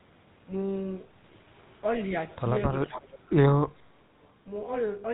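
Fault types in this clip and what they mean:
GSM full-rate codec: vocal-tract model driven by sparse regular pulses gives the speech a buzzy, gravelly roughness throughout; spectrogram shows nothing above about 3.8 kHz, which fits a 13 kbps GSM stream.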